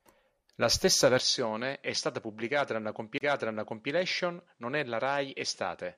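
Input switched to a poorer device at 1.2 s: from there to the end, the speech loses everything above 10.7 kHz and drops about 5 dB in level, with a faint new noise floor underneath. With no gap at the change, a mid-recording switch to a narrower-band microphone is the likely cause.

CD skip from 3.18 to 3.21 s: the sound mutes for roughly 30 ms, then carries on from a different point. The laser has jumped across the disc's spiral, so playback resumes out of sequence.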